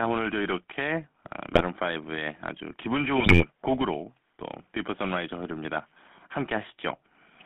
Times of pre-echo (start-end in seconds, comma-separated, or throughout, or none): none